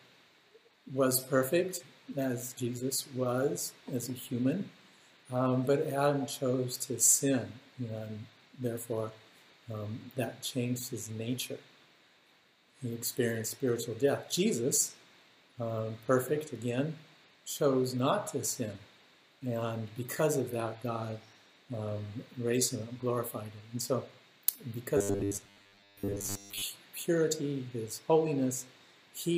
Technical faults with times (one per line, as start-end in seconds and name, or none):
24.97-26.62 robotic sound from repeated short buffers